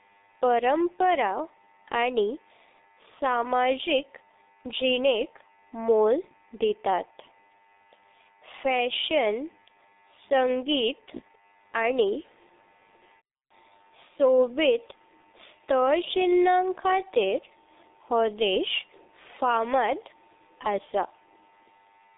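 Throughout, heavy G.723.1 codec damage: coarse 30 ms frames leave the speech muffled and hoarse with blurred consonants, with nothing above 3.8 kHz, fitting a 6.3 kbit/s rate.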